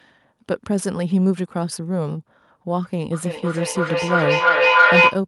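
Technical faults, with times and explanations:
3.12 to 5.25 s, feedback echo between two devices: the speech comes back roughly every 300 ms and builds to about 7 dB above the talker, because neither echo canceller removes the other device's playback.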